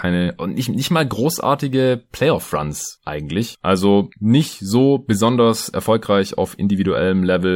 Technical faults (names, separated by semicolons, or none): none